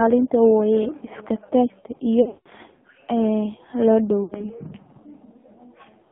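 AMR narrowband mobile codec coding runs through the whole clip. The speech is confined to a telephone band of roughly 150 Hz to 3.5 kHz, with nothing above. The coder rebuilds each short slice of voice from a vocal-tract model excited by a handful of pulses, and at this bitrate it sounds heavily buzzy and synthetic, which fits one of the lowest AMR-NB modes, around 5.9 kbps.

Lost AMR speech frames occur from 2.22 to 2.48 s. Losses are scattered over about 240 ms, with one unbroken run of 180 ms. The decoder repeats the last good pitch and vocal-tract settings at falling gain, so the sound smears into a drawn-out warble and sinks toward silence before recovering weak and rough. A shorter burst from 4.24 to 4.46 s, about 60 ms in total and consistent with three lost frames, gives a brief dip and warble.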